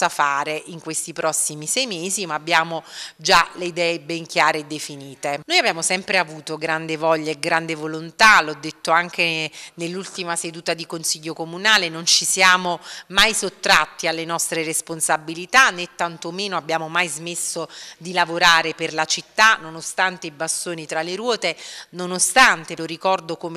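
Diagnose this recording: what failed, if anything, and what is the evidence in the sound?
Nothing failed; no fault is audible in this recording.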